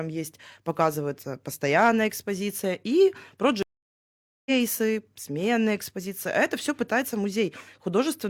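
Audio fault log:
3.63 to 4.52 s, stream reconnect: the speech just drops out for about 0.83 s, then comes back roughly half a second further along than where it left off, so a bit of the talk is simply skipped. That's the connection breaking and the player rejoining a live stream with a brand-new decoder, and you can hear the restart because the first moment after the gap comes in soft, since a fresh decoder mutes or fades its first frame or two.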